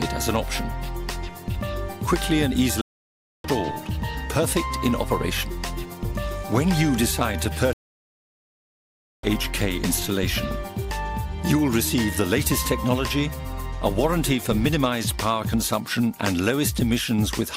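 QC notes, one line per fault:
2.81–3.47 s and 7.73–9.25 s, stream reconnect: the connection dropped, leaving silences of 0.63 s and 1.5 s. A fresh decoder resumes the live audio about 0.4 s and 1.5 s further on.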